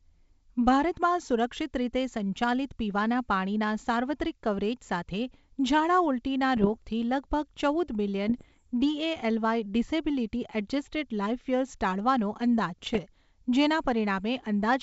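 Bit errors on an ADPCM link strike three times, at a few tenths of a percent: 6.56 to 6.78 s, 8.28 to 8.62 s, and 12.79 to 12.99 s. Each flipped bit throws the decoder's step size and predictor off track, so the damage rings on briefly instead of staying a single click. These stretches come through as pops and rough, gritty bursts with short jumps in level, against the light upper-band hiss of the wideband G.722 coding.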